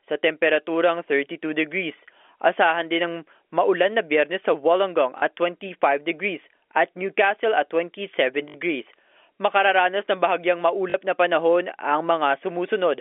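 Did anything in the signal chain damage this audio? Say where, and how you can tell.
Yes. Short robotic stutters at 5.18, 8.48 and 10.90 s, each 40 to 60 ms long, come from network packet loss with the last packet repeated.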